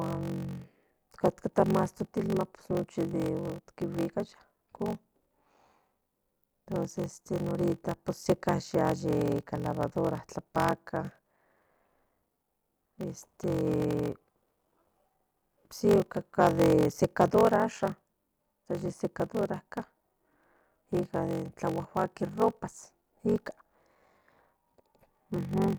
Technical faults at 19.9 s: block size mismatch (padded)

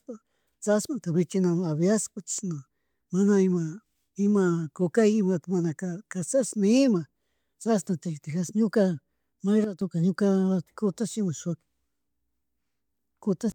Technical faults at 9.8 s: sudden gain jump

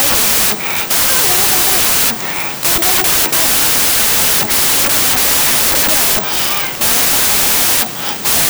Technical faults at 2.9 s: wrong sample width

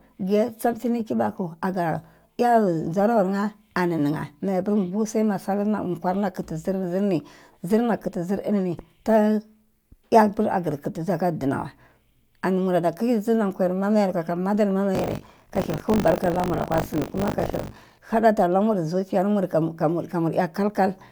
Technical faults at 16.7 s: buffer tearing

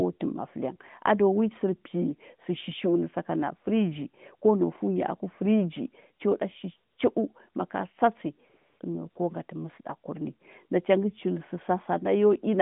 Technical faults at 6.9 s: AMR comfort noise

